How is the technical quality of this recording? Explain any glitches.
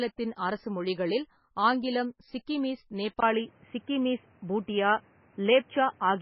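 Technical quality is poor: the speech carries heavy compression damage throughout, and the sound changes character partway through.

MP3 compression affects the whole clip. The audio has a watery, swirling texture, and nothing is present above 5.6 kHz. This is likely a very low-bitrate MP3 encode, with the damage fitting something around 16 kbps. With so few bits, the encoder drops weaker frequency lines that flicker in and out from frame to frame and cuts the treble above a fixed frequency. That removes sibilance detail and smears attacks.

An input switched to a poorer device at 3.20 s and stays that way to the end. A gap of about 20 ms marks the switch. After it, the band narrows further, with nothing above 3.3 kHz, so the speech turns duller and more boxy. The level shifts by a few decibels, and a new background noise appears well below the speech. A change of input device, such as another microphone or a headset call profile, would likely produce this combination of narrower bandwidth, different tone, level and noise floor.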